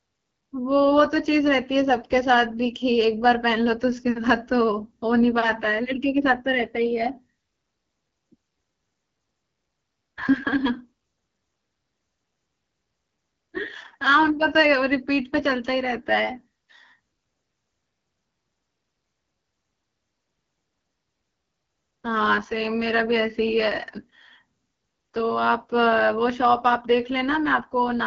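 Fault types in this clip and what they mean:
AMR wideband (HD Voice) codec: The speech sounds plainly rough and raspy throughout, and nothing is heard above 7.5 kHz. The topmost band has a hissy, noise-like quality rather than real detail. This is AMR-WB, which rebuilds speech up to 6.4 kHz from a pulse-excited vocal tract model and fills the region just above with shaped noise. The harshness fits one of its lowest rates, around 8.85 kbit/s.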